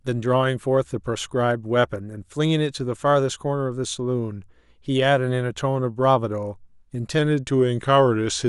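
Speech that, from 7.19 s to the end, suddenly slows by about 5.6% and drops roughly a semitone in pitch, with both shifting together. This is likely a drift correction step, where clock-matching software abruptly lowered the playback rate to rebalance its buffer.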